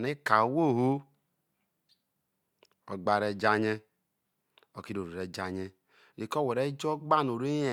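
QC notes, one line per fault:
No fault to note.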